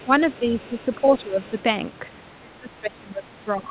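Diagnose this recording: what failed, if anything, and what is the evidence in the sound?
A faint second voice sits under the speech at 0.0–0.07 s, 0.33–0.39 s, 0.6–0.95 s and 1.47–1.62 s, roughly 30 dB below the main talker. This is the other side's voice leaking through, most likely at the call-processing stage. The far-end audio played from the talker's loudspeaker reached the microphone, and the echo canceller left a residue behind.

The talker's own level sags in stretches at 0.05–0.1 s, 0.39–0.82 s and 1.01–1.39 s, dipping by around 10 dB. From 2.38 s to the end the drop deepens to about 20 dB, so the voice sounds pulled back. This pattern points to speech suppressed in double talk, likely in call processing. The echo canceller heard both sides at once, treated the near-end voice as echo, and turned it down along with the leak.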